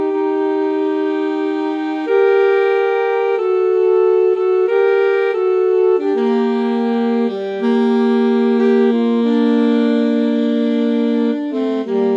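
No technical faults can be heard anywhere in this audio.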